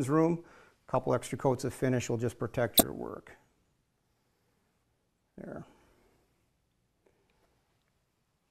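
At 2.77 to 2.81 s and again at 7.43 to 7.45 s there's a corrupt frame decoded. Flipped bits in a couple of compressed frames each time got played anyway, smearing energy into the wrong frequencies for a brief burst. The first one is far louder than the second.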